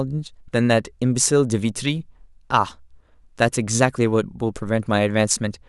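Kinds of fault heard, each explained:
Nothing stood out on listening to the speech in this clip.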